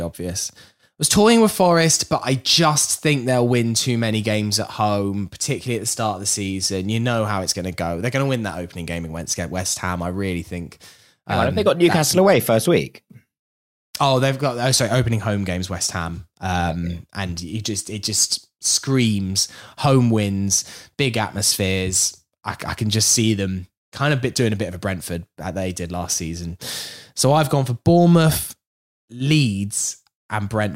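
No technical faults can be heard anywhere in this speech recording. Nothing breaks up, drops out or shifts in level at any point.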